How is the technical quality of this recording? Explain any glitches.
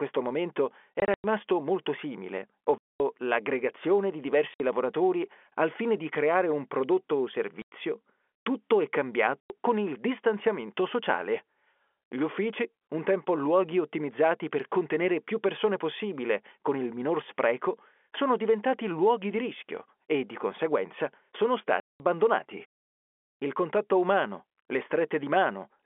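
The speech is interrupted six times by packet loss filled with silence: the receiver dropped lost packets and played nothing, cutting hard-edged holes at 1.0 s (scattered over 0.24 s), 2.78 s, 4.54 s, 7.62 s, 9.41 s and 21.8 s. Each event loses 60 to 220 ms in total, in steps that fit 20 ms packets, and the speech runs over the narrow G.711 telephone band.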